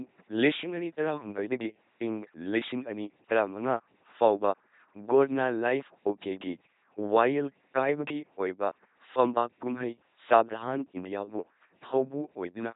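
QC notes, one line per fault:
Throughout, LPC-10 vocoder: the speech is resynthesised rather than carried. A vocal tract model of at most ten poles is driven by either a buzzing pulse train or plain noise. Each instant is forced to be entirely voiced or entirely unvoiced, which gives the heavy, mechanical robot-like quality. Nothing is heard above 3.8 kHz, and the coarseness fits a 2.4 kbit/s coder.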